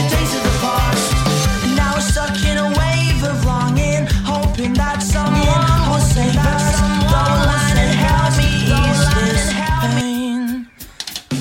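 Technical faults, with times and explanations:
5.27–10.01 s, doubled audio track: a second full-band copy of the sound runs about a second and a half behind, at roughly the same level, likely from a slower duplicate capture path. On a spectrogram it appears as an offset repeat of every feature, starting and stopping abruptly.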